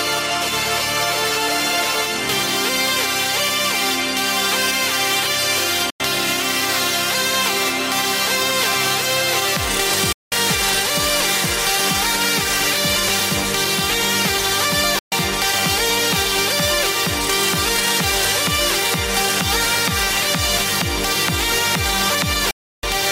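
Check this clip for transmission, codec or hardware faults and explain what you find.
The clip has a digital broadcast dropout, repeated four times. The sound mutes from 5.90 to 6.00 s, 10.12 to 10.32 s, 14.99 to 15.12 s and 22.51 to 22.84 s. Each gap opens and closes with a 3 ms fade, so it is a clean cut, not a click. The receiver stopped getting valid frames and muted until good ones returned. Gap lengths of 96, 192, 128 and 320 ms fit whole 32 ms frames. Whatever played during those gaps is gone.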